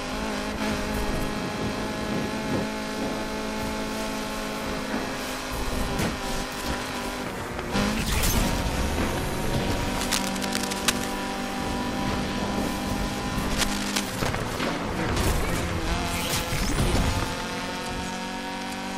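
Cable scratch noise from 10.0 to 11.04 s and 13.5 to 14.22 s: scratchy rustling, only a few decibels below the sound, likely a worn connector, showing as ragged broadband smears and spiky waveform bursts.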